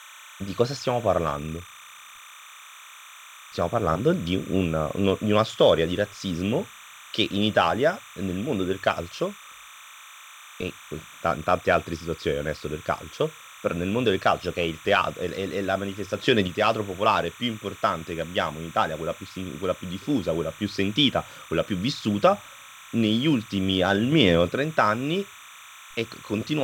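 A steady, chirping warble sits behind the speech for the whole clip, roughly 20 dB below it and flipping between pitches around 1 and 2 kHz. This is timecode bleed: linear timecode running at 29.97 frames per second has leaked into the audio path.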